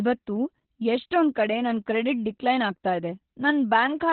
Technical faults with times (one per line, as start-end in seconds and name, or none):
0.00-4.12 Opus voice compression